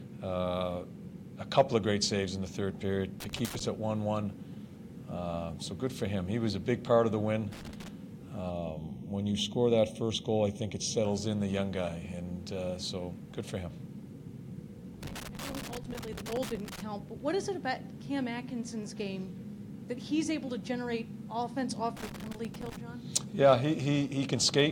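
At 3.20 to 3.61 s and again at 7.52 to 7.88 s there is loose connector crackle: a worn or dirty contact is making and breaking, so the signal is chopped into irregular scratchy bursts. Unlike digital dropouts or clipping, the crackle is uneven in timing and texture and does not track the loudness of the sound.

From 8.50 to 11.05 s the channel delay produces comb filtering. One channel runs roughly 0.3 ms late, and when the two are summed the shared content cancels at evenly spaced frequencies, the first notch near 1.5 kHz. The sound turns hollow and phasey. A plain EQ cut or low-pass would dull only one region, whereas this leaves a regular series of fixed notches.

The connector crackle returns in longer bursts at 15.03 to 16.80 s and 21.97 to 22.77 s.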